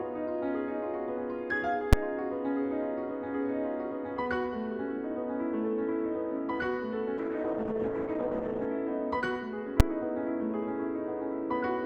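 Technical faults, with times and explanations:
1.93 s and 9.80 s: invalid numbers at full scale. Each is a single sharp bang. A calculation produced infinite or invalid values, which were pinned to the largest sample value. The block lasts only 5.8 ms, which fits a 256-sample block, so the two edge pops merge into one loud crack.
7.18 to 8.73 s: call bitrate drop. The audio turns rough and watery, and the top end goes dull. The call's bandwidth estimate fell, so the Opus encoder had far fewer bits to spend. This fits a fall from 128 kbps to about 12 kbps. It stayed at the lowest rate for about 1.5 s before recovering.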